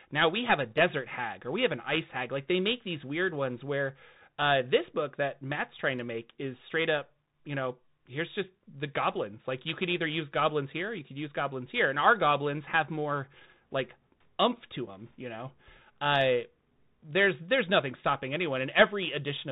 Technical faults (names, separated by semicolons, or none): Bluetooth CVSD headset codec